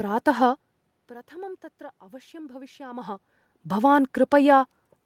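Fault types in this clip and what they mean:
No system faults are present in this speech recording.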